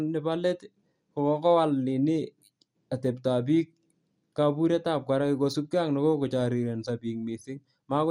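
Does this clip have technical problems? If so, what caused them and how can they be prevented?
Yes: throughout, the speech sounds dull and gurgly, with granular distortion, likely from MP2 compression starved of bits, consistent with roughly 80 kbps, switching off upper sub-bands. Prevent this by encoding at a higher bitrate or with a more efficient codec.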